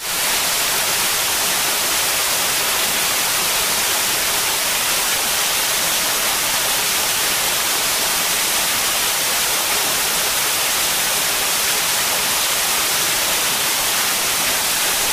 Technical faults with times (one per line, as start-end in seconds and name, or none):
0.00-15.12 hard clipping